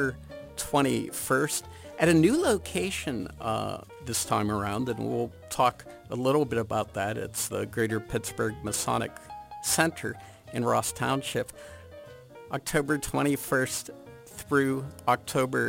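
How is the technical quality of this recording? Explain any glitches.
Technical quality is compromised by one persistent fault. Throughout the clip, crude rate conversion by nearest-sample picking, consistent with 48 kHz to 44.1 kHz, leaves periodic errors roughly 20 dB down, heard as inharmonic fizz trailing loud, bright passages.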